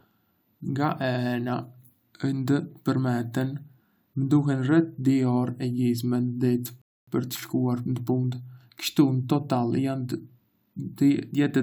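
At 6.82 s the player exhausted its downloaded audio and waited for more: a rebuffering stall, leaving 0.26 s of silence before the speech resumes exactly where it stopped.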